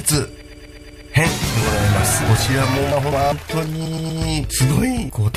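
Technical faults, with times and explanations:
0.41 to 1.13 s, repeated frames: The same 120 ms block plays again six extra times, a rapid stutter. This adds 720 ms. It points to compressed frames written or sent more than once.
2.92 to 3.32 s, chunks out of order: Two 200 ms chunks play in swapped order. The later chunk comes first, then the one that should have led. Nothing is missing, but the moment sounds jumbled, with three hard joins.
3.85 to 4.21 s, repeated frames: A 120 ms block is heard three extra times, a shorter stutter. It adds 360 ms. Again, the decoder is replaying a run of duplicated compressed frames.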